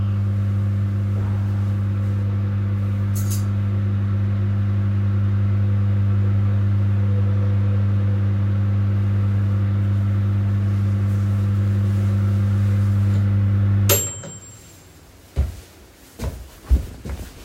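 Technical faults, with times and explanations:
No technical faults can be heard in this recording.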